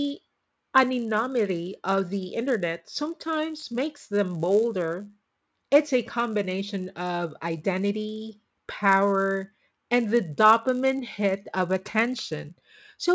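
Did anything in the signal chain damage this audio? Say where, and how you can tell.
Yes. The damage is at the sample-rate conversion stage, where the resampler restarted on every block. A steady 100 Hz buzz rides on the speech throughout and drops away in pauses. That fits conversion from 44.1 kHz to 16 kHz in separate 10 ms blocks, each edge missing its neighbouring samples.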